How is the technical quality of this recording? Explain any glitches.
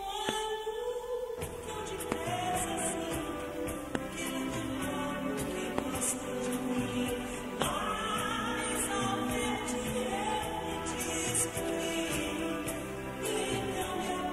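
No glitches can be heard anywhere in this recording. The audio runs without any break, distortion or disturbance that a listener would pick out.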